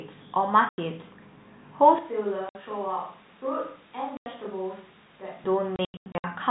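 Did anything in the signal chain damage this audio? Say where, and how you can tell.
Yes. The network stage dropped packets, and the receiver filled them with silence. There are clean gaps at 0.69–0.78 s, 2.49–2.55 s and 4.17–4.26 s, lasting 90, 60 and 90 ms. From 5.76 to 6.24 s, about 300 ms goes missing in scattered holes, the longest 90 ms. Every gap is a multiple of 30 ms, which fits 30 ms packets. On the waveform each gap is a flat silent line with abrupt edges.

From 1.99 to 5.44 s the sound turns roomy and hollow. The level falls about 10 dB and the bass thins. A room-noise floor appears, roughly 25 dB below the speech. The onset and the return are both sudden. This points to a capture-stage change, likely a switch to a distant microphone. On the waveform the envelope steps down for that stretch. The spectrogram shows weaker low frequencies, reverberant smearing after each syllable, and a raised noise floor between them. 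The 64 kbps G.711 A-law coding shows its expected 4 kHz ceiling throughout.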